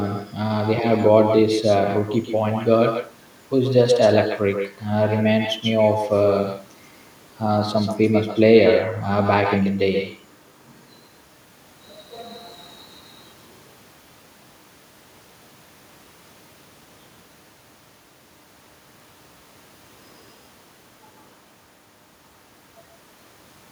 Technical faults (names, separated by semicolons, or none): echo with no canceller